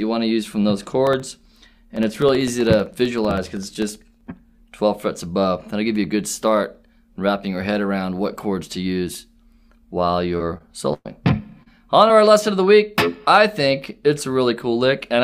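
From 1.07 s to 4.27 s there are periodic USB or driver dropouts. About every 64 ms, roughly a millisecond of audio is replaced by silence, some fifty times in all. Something on the host is likely stalling the audio path at a fixed interval. The result is a steady ticking that rides on the signal. On a waveform, each dropout is a tiny flat notch. On a spectrogram, each one is a thin vertical broadband line, evenly spaced.

Short concealed packet loss starts at 10.37 s and recurs at 10.58 s, 11.63 s and 12.08 s. In each case about 20 to 40 ms of audio never arrived. The receiver extended the preceding sound for roughly 13 to 30 ms and then blended back into the real signal. At 10.58 s, a few milliseconds of audio were also dropped. Each event is heard as a brief smear or wobble. On a spectrogram, the harmonics or noise texture briefly repeat, then a soft seam follows.

Between these, from 10.93 s to 11.07 s, there is a burst of packet loss. 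About 120 ms went missing together. The concealment carried the last sound forward for around 115 ms and faded it, with roughly 30 ms falling to silence. The result is a held, decaying buzz or hiss, after which the audio resumes with a piece skipped. On a waveform, the envelope sags and goes flat before the signal returns. On a spectrogram, frozen, fading bands lead into a dark gap.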